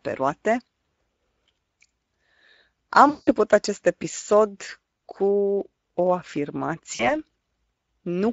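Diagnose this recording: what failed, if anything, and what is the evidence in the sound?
The codec stage failed. The speech runs through the Speex codec throughout, and the damage is plainly audible. The speech sounds hoarse and noisy, which fits a middle Speex setting around 16.8 kbps that has too few bits to code the excitation cleanly.

The network also failed, with the gaps covered by VoIP packet loss concealed by the speech codec. It happens at 3.09–3.32 s (about 180 ms lost), at 4.97–4.99 s just before "cu o" (20 ms), and at 6.95–7.22 s (40 ms). At each point the decoder stretches its last pitch and filter to cover the gap, fading it out, and the speech stays weakened for a while after the packets return.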